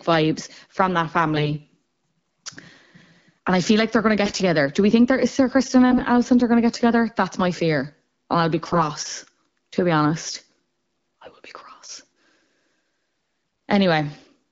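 A weak radio link flipped the less protected bits in AMR frames while the checksum on the critical bits still passed, so the speech model's pulses landed in the wrong places and its fine pitch, gain and spectral values were off. These AMR bit errors strike at 1.36–1.55 s after "vibes from that", 4.25–4.42 s after "like they're going to", 5.92–6.00 s, 8.66–8.84 s after "I'll be", 11.25–11.36 s, and 13.15–13.41 s. Each burst turns the speech hoarse, scratchy and gargly, though pitch and level roughly hold. The wideband speech around these bursts sounds clear, which fits a 12.65 kbit/s HD Voice link.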